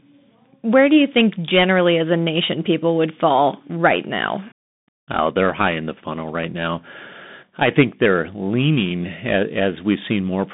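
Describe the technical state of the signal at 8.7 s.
At 8.7 s the speech is still passing through a Bluetooth CVSD headset codec, as it does for the whole clip. Each sample is coded as a single up-or-down bit with an adapting step size, which fits a 64 kbps link, and the line keeps only about 150 Hz to 3.7 kHz. The result is thin, boxy speech with no top end, scratchy s sounds, distortion where fast, loud high content outruns the step, and a plainly audible granular hiss underneath.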